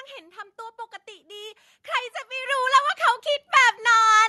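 Microphone volume stepped up at 2.46 s and again at 3.48 s. The call software judged the input too quiet and raised the device gain in single steps, about 7 dB and then about 3 dB, so speech and background noise jump louder together.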